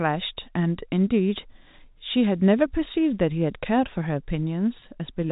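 At 4.80 to 4.82 s there is a brief packet loss with pitch repetition: about 20 ms of speech, which fits a single lost packet, is bridged by repeating the last pitch period, heard as a momentary held, slightly buzzy sound within the 4 kHz-limited G.711 telephone band.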